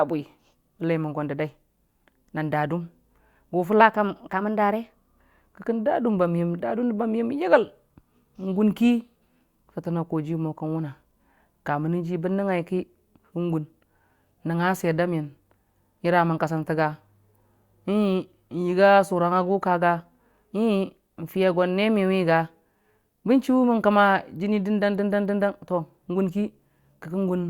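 From 3.81 to 5.42 s there's a wrong sample rate: audio recorded at 44.1 kHz plays at 48 kHz, so the speech runs 1.09 times fast and about 1.5 semitones sharp.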